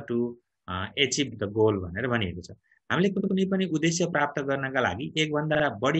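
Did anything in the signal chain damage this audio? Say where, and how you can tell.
Yes, repeated frames at the codec or storage stage. A short block plays again at 1.31–1.36 s (46 ms, once more), at 3.19–3.33 s (70 ms, twice more) and at 5.54–5.63 s (46 ms, twice more), heard as a stutter. Block lengths this size fit a few compressed frames written or sent again. On a spectrogram, identical slices sit side by side. The waveform shows copied segments, and the audio runs longer by each repeat.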